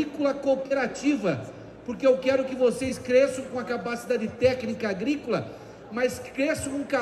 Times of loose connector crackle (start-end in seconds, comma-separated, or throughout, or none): none